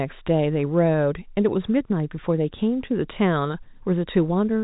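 Listening to this speech recording, nothing stood out as a technical problem, with the narrow band typical of telephone-line coding sounding just as that format should.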